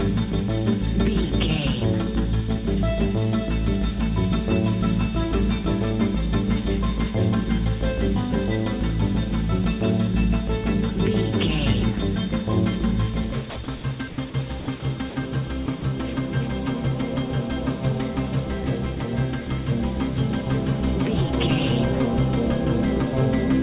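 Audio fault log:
13.5–13.84 s, 14.1–14.34 s, 14.6–14.82 s and 15.66–15.82 s, sound chopped by the voice detector: 160, 120, 100 and 40 ms are swapped for comfort noise, so the sound stutters, likely from the sender's detector toggling.
15.1–15.16 s, sound dropped by the voice detector: 60 ms of sound give way to one unbroken patch of steady comfort noise before returning, a single clean gap rather than a flicker, likely because the detector took it for background.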